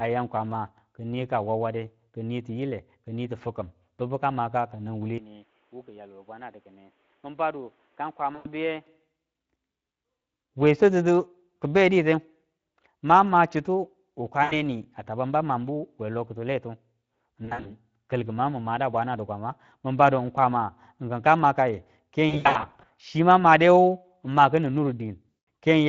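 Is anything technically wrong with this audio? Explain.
Yes. There are three distinct problems.

Speex codec, throughout: The whole clip carries plainly audible low-bitrate CELP damage, consistent with Speex at around 20 kbps. With too few bits to code the excitation, the speech sounds hoarse and noisy. On a spectrogram, the harmonic striations look smeared and grainy rather than crisp. Any energy above 8 kHz appears as a diffuse, noise-like wash with no harmonic structure.

Input switched to a poorer device, 5.18 s to 8.87 s: The sound abruptly turns dull and boxy, with no gap at the switch. Here the system likely changed to a lower-grade input. Nothing passes above 3.8 kHz, so the spectrogram shows a hard ceiling at that frequency for the whole span. The level drops by roughly 10 dB, visible as a shrunken waveform envelope, and a faint new noise floor sits well below the speech.

VoIP packet loss concealed by the speech codec: At each gap, the decoder re-synthesised speech from its last pitch and filter state while fading the gain. 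The result is a stretched, buzzy or coloured tone that dies away and leaves the following speech weak. The gaps fall at:
8.35 to 8.48 s, about 100 ms lost.
14.43 to 14.55 s, just after "mang ma chitu", about 80 ms.
17.45 to 17.71 s, just before "kalki mangu min mada", 140 ms in scattered runs of up to 60 ms.
22.29 to 22.89 s, between "kwama kinka makayu" and "chi mang", 340 ms scattered over 600 ms.
25.3 s, a brief dropout.
On a spectrogram, these show as flat, repeated harmonic bands or smooth noise that fades out. The waveform shows periodic, decaying stretches.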